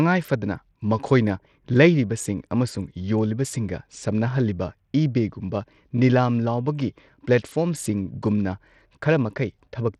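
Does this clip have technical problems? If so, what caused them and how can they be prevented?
Yes: throughout the speech, treble flickers and grit rides on the sound, likely Bluetooth SBC compression at a low bit pool near 80 kbps, unlike a clean low-pass roll-off. Prevention: record locally or wired, or use a higher-quality Bluetooth codec.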